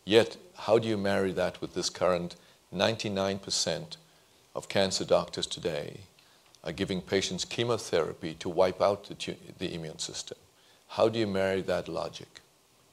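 Nothing stood out as a technical problem on listening to this audio.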